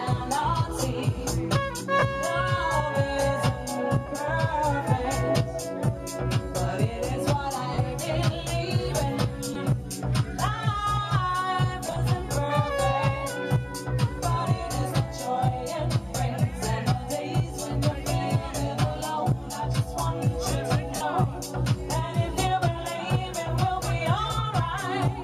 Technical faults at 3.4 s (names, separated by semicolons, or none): none